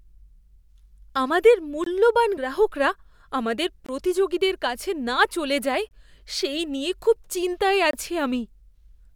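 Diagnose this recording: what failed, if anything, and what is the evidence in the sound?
Gap between chunks, at the chunked playback or streaming stage. Speech stops dead for about 23 ms at 1.84, 3.86, 5.89 and 7.91 s, with hard edges and a spacing of about 2.02 s. That regular period matches the length of each delivered chunk plus the gap. Silence is inserted at every join, likely either from codec padding or from a player that starts each chunk late. Unlike a dropout, nothing is lost: the speech resumes exactly where it stopped, only delayed.

Damaged data in a compressed stream, at the codec or storage stage. At 2.37 s there is a brief blip lasting only a couple of milliseconds. Corrupted bytes made the decoder misread a frame and lose sync, then search for the next valid header. It is a single event rather than a periodic one, which separates it from the chunk gaps.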